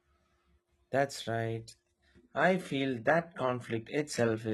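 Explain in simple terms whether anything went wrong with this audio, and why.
From 1.46 s to the end, the speech suddenly sounds duller and artificial, with no gap: an adaptive stream at a lower bitrate. The connection slowed, so the player switched to a more heavily compressed version, losing everything above about 11.8 kHz.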